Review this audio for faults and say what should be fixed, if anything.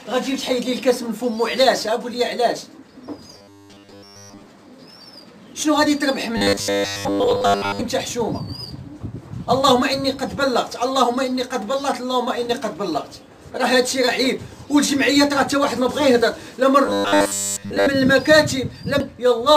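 Robotic sound from repeated short buffers appears at 3.38 to 4.46 s, 6.37 to 7.82 s and 16.86 to 17.88 s. New audio was likely arriving too seldom, so playback kept looping a tiny slice of about 10 ms while the real signal was skipped. That loop sets a rigid 100 Hz buzz over the sound, turning it metallic and mechanical. The effect is total in the first stretch and covers most of the other two. Giving the playback path a larger jitter buffer, so it never runs dry, would prevent this.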